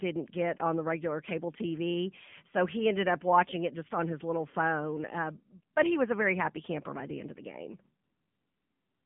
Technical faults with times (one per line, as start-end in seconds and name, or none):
0.00-9.06 AMR narrowband mobile codec
5.74 AMR comfort noise
8.04-9.06 AMR comfort noise